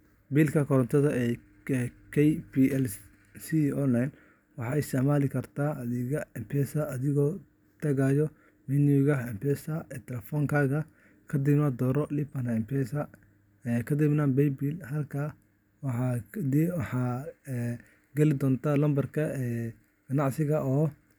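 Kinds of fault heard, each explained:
Nothing stood out on listening to the speech in this clip.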